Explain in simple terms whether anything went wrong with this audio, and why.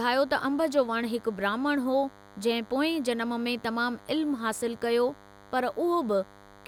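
A DECT cordless phone buzz runs under the speech from start to finish. A nearby cordless phone sends a radio pulse 100 times a second, which leaks in as a quiet, thin, rasping buzz. Mains hum, by contrast, is a smoother, deeper drone.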